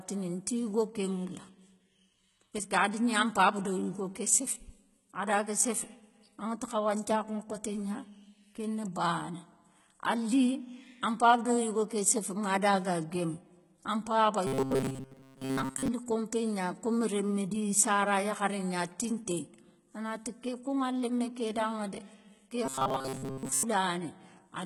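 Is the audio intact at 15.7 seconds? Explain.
No. From 14.47 to 15.88 s the sound becomes robotic, likely from repeated short buffers. New audio arrives too seldom, so through most of that span the last short slice is repeated while the real audio is skipped. This imposes a rigid 133 Hz buzz, which fits a buffer of about 7.5 ms. Unlike dropout stutter, there are no gaps, only a metallic drone that roughly follows the speech.

Throughout the clip, including this moment, the treble is likely rebuilt by heavy HE-AAC compression at around 16 kbps. Its spectral band replication copies lower bands upward, so s sounds turn gritty and lispy. Plain low-pass filtering would instead sound dull.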